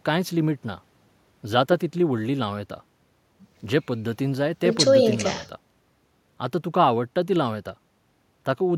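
No technical faults can be heard anywhere in this recording; the signal stays continuous and intact for its whole duration.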